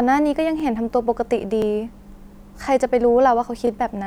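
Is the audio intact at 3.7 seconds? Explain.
No. A brief stutter from 3.67 to 3.70 s is overlapping chunks: each 1-second chunk begins early, replaying about 25 ms at the join.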